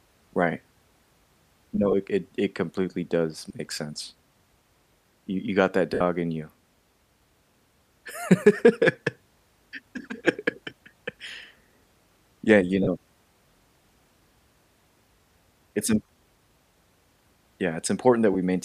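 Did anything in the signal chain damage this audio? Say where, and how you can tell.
Yes. The Bluetooth radio link dropped LE Audio frames at 1.92–1.94 s (before "it it it completely"), 3.49 s (between "it it completely does" and "make sense"), 5.94–6.01 s (after "you got that"), 12.83–12.87, 16.07 and 18.33–18.36 s. The longest gap is about 68 ms, which fits roughly nine 7.5 ms frames. The decoder concealed each gap by repeating the last spectrum with scrambled phase, so voiced harmonics blur into a noisy smear. On a spectrogram, the harmonic lines break into a diffuse band that fades across the longer gaps. On the waveform, the envelope holds briefly and then sags. The likely LC3 coding underneath stays light.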